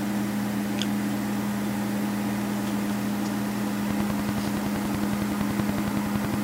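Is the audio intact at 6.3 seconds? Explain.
No, a train of clicks runs from 3.91 to 6.35 s: regular ticks at 10.7 per second, well above the sound, likely from interference, unlike random crackle.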